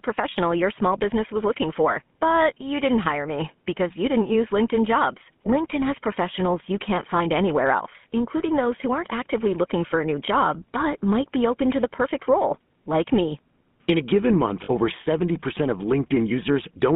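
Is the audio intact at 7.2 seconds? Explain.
No. From 7.18 to 7.21 s there is a brief rough, metallic ring where the sound should keep moving. This comes from lost GSM frames. The decoder had no valid data there, so it reused the settings of the last good frame rather than leaving a gap. The hold lasts about 20 ms, which points to a single lost frame, so it is heard as a short smear and not as a fade to silence.

Underneath that, and at this moment too, the speech has a buzzy, gravelly roughness, and the band is confined to roughly 150 Hz to 3.5 kHz, with nothing above that. This is the GSM full-rate codec. It models the vocal tract and drives it with a sparse, regularly spaced pulse excitation, keeping only a fraction of the excitation samples. That coarse excitation produces the plainly audible grit, and the result fits a 13 kbps full-rate coder.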